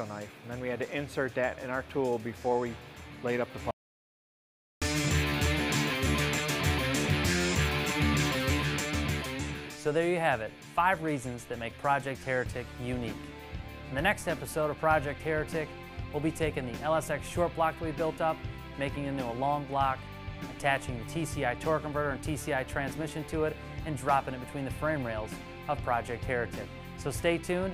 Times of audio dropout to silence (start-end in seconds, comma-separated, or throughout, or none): 3.71-4.82